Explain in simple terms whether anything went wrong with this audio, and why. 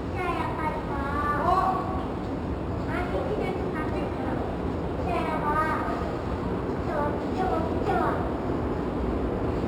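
Imaging from linear upsampling runs through the whole clip. The sound's rate was raised by simply joining neighbouring samples with straight lines, which fits a 12 kHz original. That dulls the top end and leaves faint ghost copies between 6 and 12 kHz, adding a thin metallic sheen.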